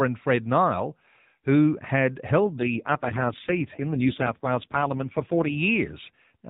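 Just after "who had", at 2.41 s, an AMR rate drop makes the speech rougher and more synthetic until 5.58 s, consistent with the codec falling from 12.2 to 4.75 kbps.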